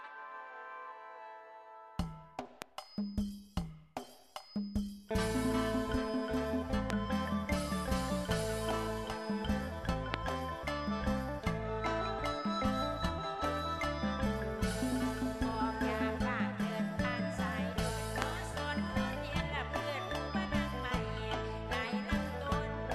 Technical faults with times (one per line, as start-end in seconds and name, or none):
2.62-2.64 loud pop
6.90-6.92 loud pop
10.14-10.16 loud pop
18.22-18.24 loud pop